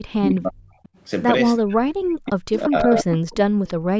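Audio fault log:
0.0–0.81 s and 1.58–3.09 s, speech suppressed in double talk: the speech sinks by up to about 40 dB, most likely because the echo canceller mistook overlapping far-end sound for echo. Unlike gating, the speech itself drops, not just the room.
0.36, 0.84–1.01, 2.52, 2.98–3.37 and 3.66–3.74 s, echo leak: a delayed copy of the speech trails 335 ms behind. It sits about 30 dB down early, rises to about 10 dB down near 2.5–3.4 s, then falls to about 25 dB down, likely from residual loudspeaker pickup. A fixed lag separates it from reverb.
3.76–3.9 s, background gated by the echo canceller: the room tone drops by about 40 dB for roughly 150 ms, then returns as the canceller releases the microphone. The dip hits only the background during loudspeaker playback, unlike double-talk suppression of the speech.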